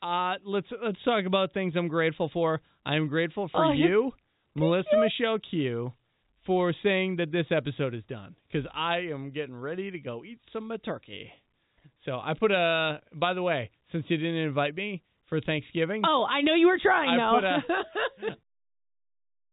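No technical faults can be heard in this speech recording. It carries G.711 telephone coding, with nothing above 4 kHz, and ends in a smooth fade-out at about 18.4 s.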